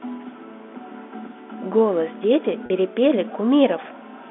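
At 2.66 s the speech has a packet loss with pitch repetition, lasting to 2.70 s. About 40 ms of audio went missing, which fits two 20 ms packets dropped in a row. The receiver filled the hole by repeating the last pitch period it had. Because the gap is short, it never fades to silence. It sounds like a brief held, buzzy tone before the speech resumes. The telephone band of the G.711 line is heard throughout.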